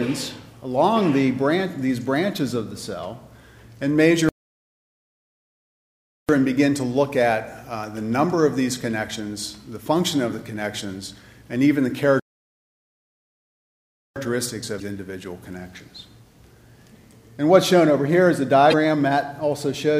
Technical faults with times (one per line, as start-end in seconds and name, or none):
4.29-6.29 playback stall
12.20-14.16 playback stall
14.77-14.82 damaged data in a compressed stream
18.69-18.74 damaged data in a compressed stream